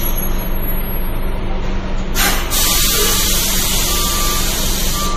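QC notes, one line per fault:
Throughout, MP3 compression. Nothing is audible above 15.2 kHz, where the treble stops at a hard ceiling. The damage is plainly audible, and it is likely caused by a lossy MP3 encode at a rate that fits roughly 40 kbps. At that rate the encoder runs short of bits. It drops the top band and discards quiet frequency detail that flickers in and out between frames. That leaves a watery, swirling quality across these sounds, and sharp onsets lose their crispness.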